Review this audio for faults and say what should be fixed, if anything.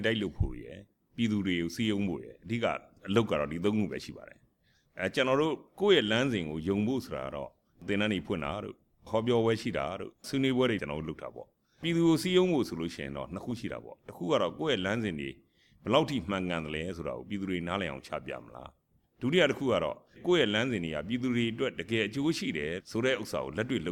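No faults turn up anywhere in this recording, so nothing needs fixing. It can be left as it is.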